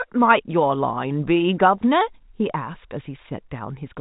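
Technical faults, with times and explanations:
The speech comes through G.711 A-law telephone coding at 64 kbps, with no content above 3.8 kHz and only the faint, level-following quantisation noise that format carries, and there are no technical faults to report.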